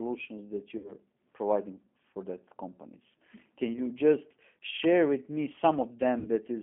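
Throughout, the G.729 codec narrows the speech to a 200 Hz to 3.4 kHz band. On a spectrogram, nothing appears above 3.4 kHz. The codec damage is plainly audible as the rough, synthetic texture of a low-rate predictive speech coder, which fits 8 kbit/s G.729A.

At 0.78 to 0.94 s, 3.73 to 3.80 s (just before "just share with me") and 6.19 to 6.29 s, there is VoIP packet loss concealed by the speech codec. The missing 60 ms, 20 ms and 60 ms are filled with a fading extension of the preceding sound. On a spectrogram this appears as smeared harmonics or noise, and the waveform envelope sags until speech recovers.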